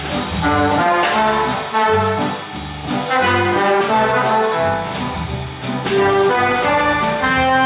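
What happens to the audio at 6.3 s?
Nothing goes wrong at 6.3 s: the audio continues intact through that moment, carried as before over a narrowband call path that leaves nothing above 4 kHz.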